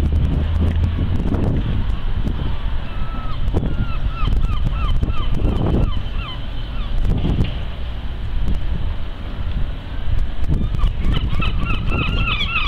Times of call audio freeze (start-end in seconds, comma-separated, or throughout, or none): none